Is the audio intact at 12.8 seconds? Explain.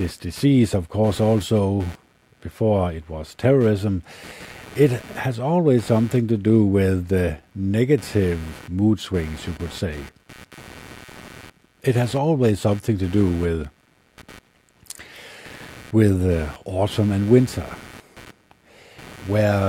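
No. Computer activity noise runs through the whole clip, including 12.8 s. Processor, graphics or mouse load shifts the audio circuit's shared ground, adding a buzzy, scratchy chatter pulsing around 150 times a second, roughly 25 dB below the speech.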